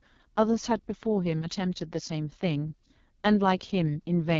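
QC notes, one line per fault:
Throughout: AMR wideband (HD Voice) codec. The speech is rough and raspy, with heavy coding damage, which fits the lowest AMR-WB mode around 6.6 kbit/s. Nothing is present above about 7.3 kHz. Narrowband AMR would stop near 3.4 kHz and a plain low-pass would not add rasp. Here the top band holds hissy, noise-like fill rather than real detail, because the codec synthesises that region from shaped noise.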